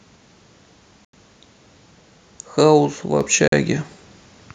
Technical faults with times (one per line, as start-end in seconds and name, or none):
1.05-1.13 Bluetooth stall
3.21 microphone volume stepped up
3.48-3.52 Bluetooth stall